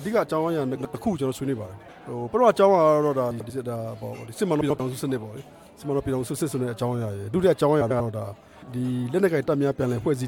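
A brief garbled flutter occurs at 0.75–0.94 s, 3.31–3.50 s, 4.61–4.80 s and 7.81–8.01 s. These are frames out of order: two adjacent blocks of about 93 ms, consistent with four frames each, play swapped, without any loss of time.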